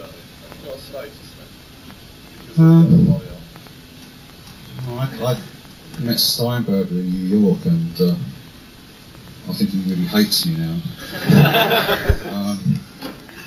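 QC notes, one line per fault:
Throughout, imaging from sample-and-hold upsampling: a metallic fizz sits about 18 dB below the programme and rises and falls with it. The lowest mirrored copy fills roughly 8 to 16 kHz, so pitch movement below appears inverted up there. Spacing points to a 16 kHz source raised to 48 kHz by holding each sample with no interpolation filter, leaving spectral images folded around each multiple of the old rate.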